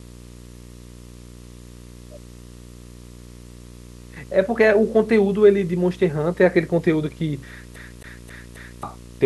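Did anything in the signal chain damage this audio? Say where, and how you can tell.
Yes. Video or display buzz runs through the whole speech clip, picked up in the analogue wiring. It is a steady 60 Hz field-rate buzz with hash above it, roughly 25 dB below the speech. Mains hum is a cleaner tone, without that raspy upper edge.

At playback, the disc is a CD stuck on one turn from 7.76 to 8.83 s. A 268 ms slice of speech repeats four times, with a brief mute at each laser jump. That regular, identical looping distinguishes it from network packet-loss repeats, which vary.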